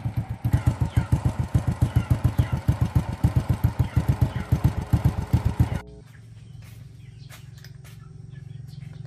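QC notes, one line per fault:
4.05 to 6.01 s, mains hum: a steady low 60 Hz drone comes up underneath, sitting roughly 20 dB below the signal, with a few low harmonics. That's power-line interference leaking in, probably a ground loop or a transformer close to the cabling.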